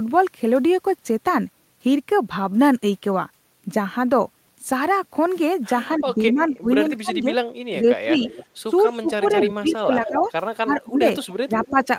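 Speech suppressed in double talk cuts into this speech recording at 5.96–7.34, 7.72–8.23, 8.67–11.04 and 11.46–11.8 s, with the voice dipping or breaking up by about 20 dB (about 15 dB in the last span). This is likely an echo canceller that could not separate the talker from loudspeaker echo while both sides spoke, so it turned both down. Echo leak appears at 8.26–8.46, 9.24–9.74, 10.07–10.29 and 11.22–11.87 s as a delayed copy of the voice 257 ms behind, ranging from about 20 dB down to only about 5 dB below the speech. The likely cause is a loudspeaker-side canceller leaving residual echo that was sent back.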